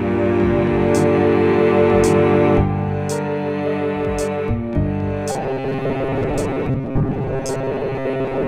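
Robotic sound from repeated short buffers, 5.32 s to the end: a rigid 134 Hz buzz, likely from looping 7.5 ms snippets while about half the audio is skipped.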